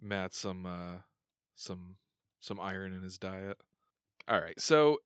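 Nothing in this speech recording registers as a technical fault: it carries the ordinary character of a call path, with the microphone processing trimming the lowest bass and the call codec limiting content to about 8 kHz, consistent with an Opus stream at roughly 32 kbps.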